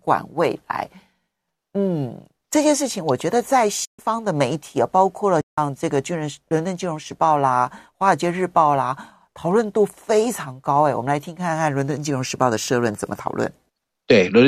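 AAC frame loss with muting hits this speech clip at 3.85–3.99 s and 5.41–5.58 s, leaving silent gaps of 140 ms and 170 ms. The decoder zeroed the missing frames, and the overlapping windows fade the sound out and back in, so each hole has soft edges. The gap lengths fit the short frames of a low-delay AAC stream, likely AAC-ELD at 64 kbps.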